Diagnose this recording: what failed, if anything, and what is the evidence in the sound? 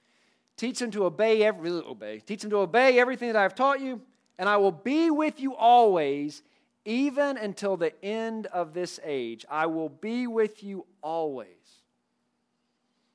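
Nothing in the speech signal points to a failure at any stage, from capture and conversion through processing, transmission, storage and playback, so there is no fault to diagnose.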